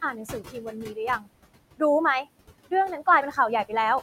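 Throughout the clip the background keeps falling away between phrases and swelling back in beneath the speech. These are noise suppressor artifacts: the suppressor judges which frequency bands hold steady noise and pulls them down frame by frame, here by about 20 dB. The room noise, sitting about 17 dB below the speech, gets pumped along with it.

From 0.12 to 0.97 s, stretches of the speech sound swallowed and faint, softer edges dropping out for something like 0.4 s in total. This is speech cut by the noise suppressor, which mistook those quiet parts for background and turned them down with it, by about 13 dB at the deepest. The same brief dulling recurs from 1.19 to 1.28 s, again reaching about 13 dB.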